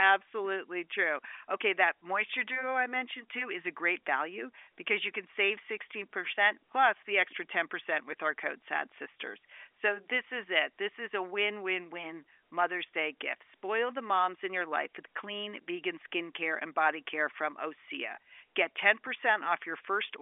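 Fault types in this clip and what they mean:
No faults in this clip.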